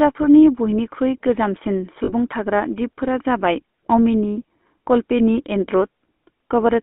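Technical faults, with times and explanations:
throughout GSM full-rate codec: the vocal tract is modelled and driven by sparse, regularly spaced pulses, giving plainly audible buzzy, gravelly roughness, which fits the 13 kbps full-rate coder. The band runs only from 200 Hz to 3.5 kHz, so the speech sounds thin and boxed.
2.04–2.12 s lost GSM frames: for about 40 ms the sound freezes into a brief rough, metallic ring. The decoder repeats the last good frame's settings rather than passing new audio, a gap that fits two missing frames.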